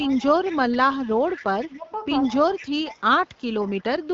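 From the start to 1.68 s there's a faint second copy of the speech trailing about 156 ms behind, roughly 20 dB down. That's an echo leak: the far end is likely on a loudspeaker, and its echo canceller let some of that pickup slip back into the line. Right after, from 1.67 to 1.9 s, the speech ducks by around 15 dB for a couple of hundred milliseconds. That's speech suppressed in double talk, likely the canceller clamping down on everything because it couldn't tell the talker from its own echo while both sides overlapped. The echo leak returns from 2.23 to 4.08 s with the same 156 ms lag and low level. Inside that stretch, from 2.42 to 3.01 s, the speech sinks again by about 10 dB for roughly 300 ms in patches, the same suppression kicking in. Underneath, the band stops near 7.4 kHz, which fits AMR wideband HD Voice coding at a decent rate.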